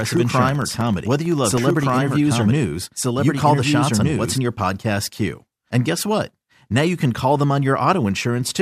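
A second, slower capture path or an edit holding two copies out of step has likely mixed the same audio in twice. A doubled audio track is already present when the speech begins and runs until 4.38 s. The second copy trails by roughly one and a half seconds at about the same level, so two full-band versions of the speech overlap with no decay or room colour on the late one. At 4.38 s the copy cuts off abruptly.

From 0.10 s to 1.90 s, a background task stalls the USB bus or audio driver every 64 ms, causing periodic USB or driver dropouts. Each stall loses around half a millisecond of audio, which is replaced with silence. This happens roughly thirty times across that stretch. The gaps come through as an even train of ticks at that 64 ms spacing, sitting on top of the doubled speech and heard only where there is signal.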